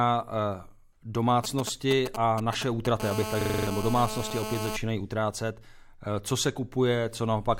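From 1.44 to 3.02 s, GSM signalling bursts cut in: a nearby 2G phone transmitting only intermittent groups of 216.7 Hz radio pulses, which the audio circuitry rectifies. The result is a galloping dit-dit-dit of brief buzzes sitting a little below the speech, broken up rather than continuous.

At 3.02 s this turns into a steady GSM phone buzz that runs until 4.77 s, just before "utrácet co se". Here the phone is in a call, pulsing continuously at 216.7 Hz, so the rectified interference becomes an unbroken, raspy, harmonic-rich drone at about 7 dB below the speech, with no stops and starts.

Inside that buzz, from 3.41 to 3.67 s, a system hang loop interrupts the speech itself. The playback stalled while the hardware kept replaying one 42.67 ms slice, which fits a 2048-sample buffer, six times at 23.4 Hz. It sounds like a machine-gun stutter and replaces roughly a third of a second of audio. 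Unlike the phone interference, it repeats the audio content rather than adding a buzz.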